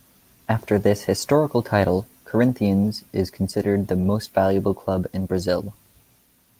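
Speech recording with no audible technical faults.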